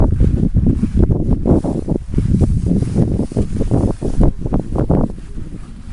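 The audio contains no audible technical faults. There is nothing to mark at any point in it.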